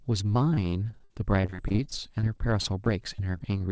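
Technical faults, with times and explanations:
0.54 to 3.62 s, repeated packet loss (robotic sound): over this stretch roughly two dozen short dropouts hit the speech in quick succession, the longest about 56 ms. The receiver patches each hole by stretching the last bit of sound, which accounts for about half a second of filler and about 17% of the span. The repeated smeared patches and the 0.4 s of sound that is simply gone make the speech choppy. Throughout, nothing above 8 kHz, which fits a wideband G.722 call path at 64 kbps.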